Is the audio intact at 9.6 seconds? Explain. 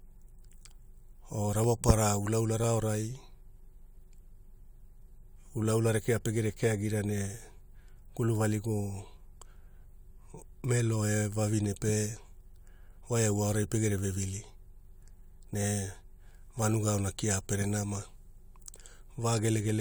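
No. At 9.6 seconds the clip is inside a run of periodic USB or driver dropouts lasting from 0.65 s to 19.62 s. Roughly once per second, something briefly stalls the USB bus or audio driver, and about half a millisecond of samples is skipped outright rather than padded with silence. Each skip joins the waveform discontinuously, so the speech carries a regular tick or small pop about every second, around twenty in all.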